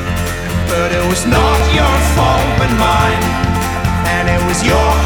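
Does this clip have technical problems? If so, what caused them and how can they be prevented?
Yes. Brief skips at 1.60, 2.58, 3.56 and 4.53 s, roughly once per second. This is likely audio missing between chunks, losing roughly 20 ms at each boundary. Prevent it with continuous buffering, so one-second chunks overlap or hand off without gaps.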